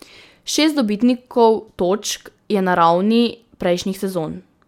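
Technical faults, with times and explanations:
No technical faults can be heard in this speech recording. There is nothing here that needs a time or an explanation.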